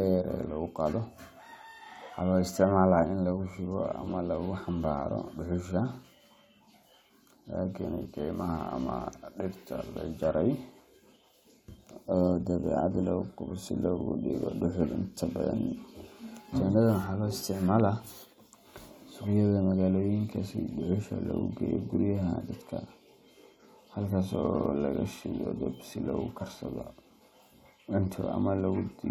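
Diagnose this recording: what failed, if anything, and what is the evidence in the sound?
Nothing stood out on listening to this speech recording that would point to a failure at any stage of the chain.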